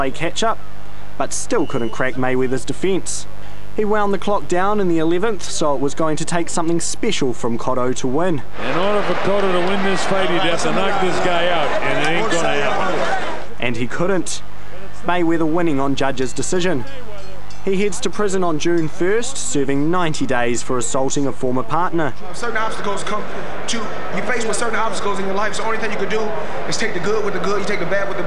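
From start to finish a mains buzz runs under the sound, a steady, raspy edge rather than a clean hum. It is built on 50 Hz mains: sharp switching spikes from something like a dimmer, rectifier or unshielded path enter twice per cycle, so the interference carries a dense series of harmonics climbing into the kilohertz range. It sits roughly 25 dB below the wanted signal.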